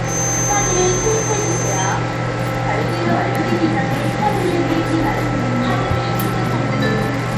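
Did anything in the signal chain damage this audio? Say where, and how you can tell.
Yes. At the codec stage, the whole clip carries what is likely Bluetooth SBC compression. The treble flickers and drops away, and gritty noise and aliasing ride on the sound, which fits a low bitpool around 96 kbps. The damage spans the full clip and tracks the signal, unlike steady hiss.

From 0.0 to 2.0 s a thin, steady feedback whistle sits at 6.2 kHz, only a little below the sound and swelling and fading slowly. This is likely a loudspeaker-to-microphone loop hovering at the edge of feedback. Unlike a pure interference tone, its level wavers, and it never runs away into howl.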